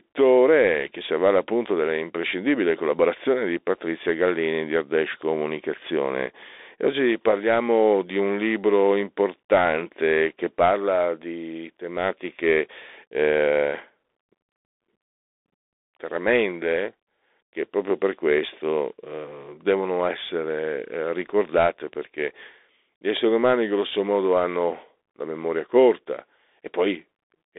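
From start to finish, the speech carries a Bluetooth CVSD headset codec. Nothing above 3.8 kHz survives. The band runs from 300 Hz to 3.6 kHz. The one-bit step coding is plainly audible. S sounds turn scratchy, loud bright sounds distort, and granular hiss lies underneath.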